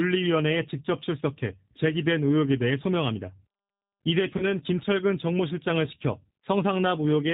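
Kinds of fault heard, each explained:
G.729 codec: The speech passes through a low-rate voice codec that models the vocal tract and pitch and codes each frame with a few pulses, which fits 8 kbit/s. Nothing above 4 kHz survives. The damage is plainly audible as a rough, synthetic edge throughout.
VoIP packet loss concealed by the speech codec: Around 4.38 to 4.46 s, about 20 ms of audio goes missing. The decoder fills the gap by extending its last pitch and filter at falling gain, giving a brief buzzy tone or coloured noise that fades. The effect lingers as the decoder recovers.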